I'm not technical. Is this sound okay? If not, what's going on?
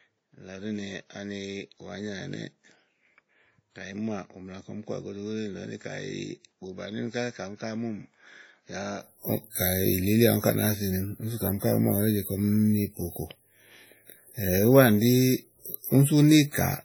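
No. From the start to about 9.03 s the recording likely comes from a poorer input device: the speech is duller, missing everything above 7.6 kHz, quieter, and carries its own low background noise. At 9.03 s it switches to the better input, with no gap.

Throughout the whole clip there is also heavy damage from compression, likely WMA compression. The encoder saved space by throwing away detail, so the speech sounds washy and ringing, with a hiss that rises and falls along with it.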